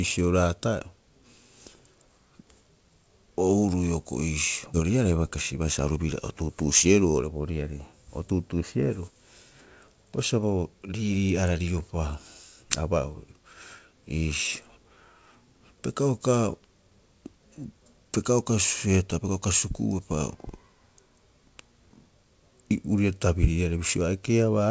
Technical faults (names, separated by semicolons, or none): skip ahead; jitter buffer speed-up